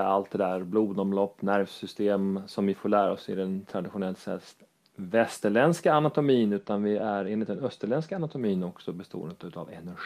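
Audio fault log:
6.58–8.41 s, channel delay (comb filtering): one channel falls behind the other by only a couple of samples, roughly 0.04 ms, and the pair is then summed to mono. Content common to both channels now arrives slightly out of step and cancels at regularly spaced frequencies, the first notch sitting around 10 kHz. With the cancellation confined to the top of the spectrum, this stretch loses its air and sheen, sounding duller.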